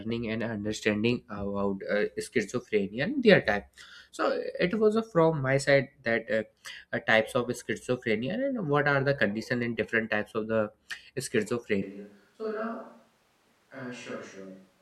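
A speech recording in which, at 11.82 s, the sound abruptly turns roomy and hollow, loses bass, and drops by roughly 10 dB, with background noise now sitting only about 30 dB below the speech. This character holds through to the end of the clip. The sudden, sustained change is consistent with a switch to a distant microphone, likely because the close microphone's feed dropped out and a farther pickup, such as a camera microphone, carried the audio instead.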